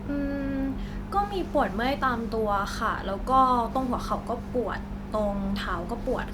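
No technical faults can be heard anywhere in this speech recording.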